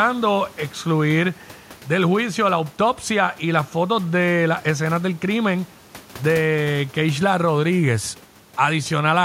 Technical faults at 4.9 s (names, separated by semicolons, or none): none